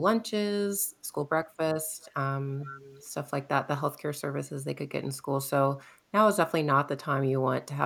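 A loudspeaker on the far end of the call likely let part of its own playback back into its microphone, past an echo canceller that did not remove it all. This echo leak returns a delayed copy of speech, arriving 408 ms late. From 2.02 to 2.14 s a short scrap sits about 30 dB below the speech. From 2.61 to 3.07 s a longer stretch comes back much louder, about 15 dB down.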